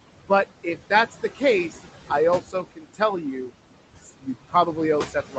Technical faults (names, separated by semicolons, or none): noise suppressor artifacts; speech cut by the noise suppressor